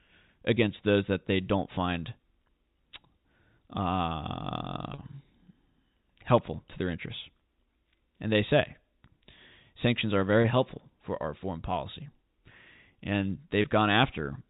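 At 4.94 s, 10.42 s (between "sanctions are" and "helpful for our foreign") and 13.62 s, packet loss with pitch repetition bridges gaps of 40, 20 and 20 ms by looping the last pitch period. Each gap sounds like a brief buzzy hold rather than a plain dropout's silent hole.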